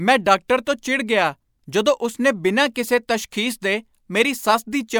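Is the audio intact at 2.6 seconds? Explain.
Yes, at 2.6 seconds the speech plays through intact, with no dropout, click, distortion or other technical fault at that moment.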